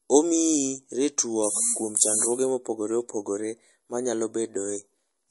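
MP3 compression, likely, runs through the whole clip. Nothing is left above about 11.3 kHz, where the treble has been cut off sharply, and the speech carries plainly audible codec damage: a watery, swirling texture as weak frequency components drop in and out between frames, with metallic chirping on s sounds and softened attacks. That combination of a hard treble ceiling and unstable detail points to an encoder short of bits, consistent with a low rate near 48 kbps.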